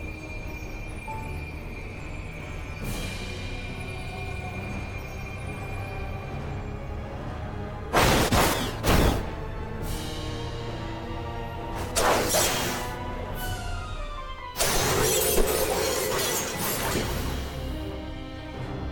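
No technical faults can be heard anywhere in the signal, which stays steady and intact throughout.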